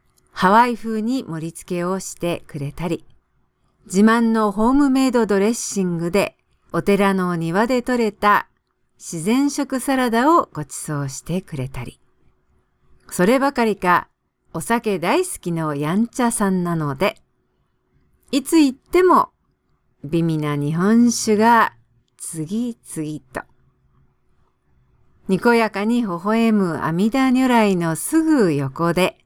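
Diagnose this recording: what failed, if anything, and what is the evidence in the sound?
Nothing in this speech recording stood out as a fault on listening.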